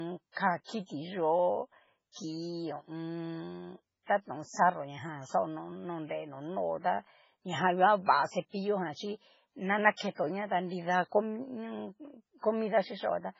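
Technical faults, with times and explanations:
Throughout, low-bitrate audio saved at a high bitrate: the speech has nothing above 7.6 kHz and carries the smeared, watery artefacts of a heavily starved MP3 encode, which fits a 16 kbit/s stage, yet the stream is stored as a high-rate MP3, which fits a 320 kbit/s re-save. The likely cause is a poor encode passed through a better one. Unlike a simple low-pass filter, the damage goes beyond the missing top, and the second encode cannot restore it.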